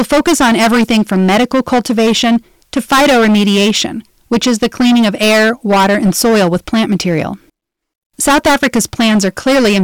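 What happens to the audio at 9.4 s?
At 9.4 s the speech is still under the hard clipping that runs through the whole clip: it is pushed about 20 dB past what the stage can pass, so roughly a fifth of samples are cut flat. The result is harsh fuzz, with squared-off waveform peaks and harmonics smeared high up the spectrogram.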